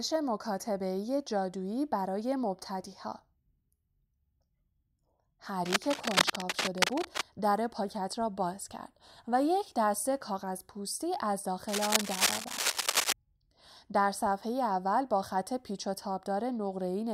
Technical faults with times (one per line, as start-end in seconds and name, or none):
5.66-7.22 cable scratch noise
11.68-13.13 cable scratch noise